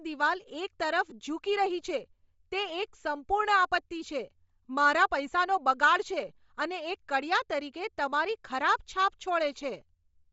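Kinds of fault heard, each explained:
Bluetooth LC3 compression: Plainly audible throughout the speech as a breathy, grainy edge on the upper frequencies, where fine detail is replaced by hiss-like fill. This is likely a low-rate LC3 transform codec, which fits about 32 kbps with 7.5 ms frames. It differs from MP3-style damage, which sounds watery and swirling rather than noise-filled.
Lost LE Audio frames: A brief smeared, noisy patch from 1.10 to 1.12 s, where about 15 ms of signal is missing. The decoder repeats the last spectrum with scrambled phase, which fits two lost 7.5 ms frames. It differs from a dropout, which is silent, and from a click, which is sharp.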